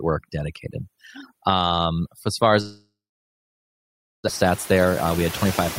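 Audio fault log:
throughout: overdone noise removal. The background drops to near silence dotted with twinkling specks, because whole bands near the noise estimate are cut away together with quiet speech detail. That loss of voice detail separates it from gentler suppression.
throughout: noise suppressor artifacts. Steady noise is pulled down by about 13 dB frame by frame, so it sinks in pauses and returns under speech. This is clearest after the room noise rises about 24 dB near 4.5 s.
2.61–4.30 s: long network dropout (likely cause). Right after "as far as" the sound smears into a fading buzz or hiss, then about 1.3 s of silence follows. The audio resumes with roughly 0.92 s missing, not merely paused, which sets this apart from a short glitch.
4.43–5.46 s: jitter buffer speed-up. Speech runs about 9% fast and sounds hurried while its pitch stays unchanged, as the receiver trims short pitch-period pieces, roughly 0.1 s in total, to shrink a built-up delay. 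Unchanged pitch distinguishes it from a playback-rate error.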